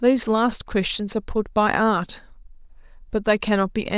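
No technical faults turn up in the speech at any point, so there is nothing to place in time order.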